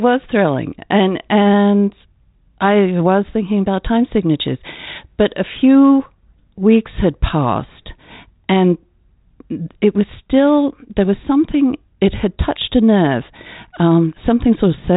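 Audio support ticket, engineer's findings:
No faults found on this speech recording. G.726 ADPCM path at 32 kbit/s working normally: band ends near 3.8 kHz, with only light coding grain audible.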